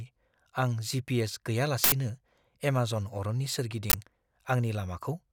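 Harsh, loud bursts of digital noise break through the speech at 1.84 to 1.92 s and 3.90 to 3.94 s: an uninitialised buffer, where blocks of leftover memory were played as samples.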